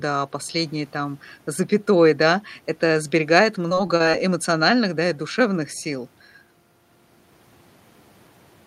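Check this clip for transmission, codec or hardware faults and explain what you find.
One transmission fault is audible in the speech.

Repeated packet loss (robotic sound) runs from 3.69 to 4.15 s. Five short gaps, none longer than 30 ms, are each patched by extending the preceding sound, so about a fifth of that stretch is concealment. It sounds choppy, with fragments missing.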